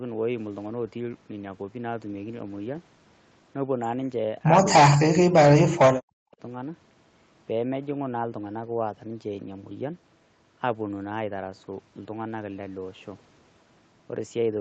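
At 5.67 to 5.8 s and again at 5.96 to 6.42 s the speech is pulled down hard, dropping by roughly 40 dB until it nearly vanishes. This is speech suppressed in double talk, likely because the echo canceller mistook the talker for loudspeaker echo while the far side spoke and attenuated both.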